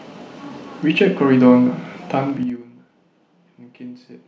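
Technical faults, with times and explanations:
2.30–2.62 s, zipper noise: while the speech drops in level, a rapid ticking rides on top of it, like a zipper being pulled, for about a third of a second. The gain was lowered in coarse 4 dB jumps, about fifteen a second, rather than as a continuous slope, for a total fall of about 20 dB. Each abrupt jump puts a small discontinuity in the waveform, and the run of them is heard as the ticking.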